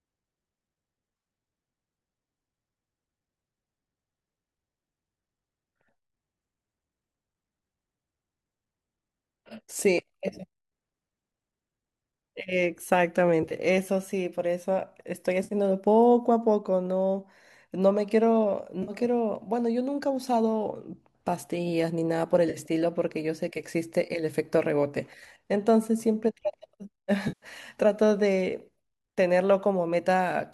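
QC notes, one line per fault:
13.43–13.53 s, 15.44–15.54 s, 18.83–18.92 s, 22.50–22.57 s, 27.28–27.46 s: AAC frame loss with concealment. Brief smeared, noisy, phasey patches appear where the decoder filled lost frames from the last good spectrum, not the hard gaps of simple dropouts. The first patch is broken up over about 80 ms, with no stretch longer than roughly 30 ms. The last is the longest, at 140 ms. The short chunks fit the 10 ms frames of the likely low-delay AAC stream.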